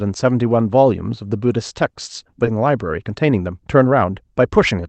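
At 2.45 to 2.47 s the speech skips ahead. About a second of audio is gone. Nothing fills the hole, so the two sides are joined almost directly. A stretch of older audio was dropped while newer audio was already waiting. The listener hears an abrupt jump forward in the talking, with no pause to mark it.

From 2.55 s to 4.79 s comes a jitter buffer speed-up. The speech runs at about 111 percent of its normal rate, but the pitch stays the same. The buffer still held more audio than it aims for. So the receiver cut many tiny pieces, each one or a few pitch periods long, about a third of a second in total. The speech sounds hurried. The Opus call path limits the top end to about 8 kHz throughout.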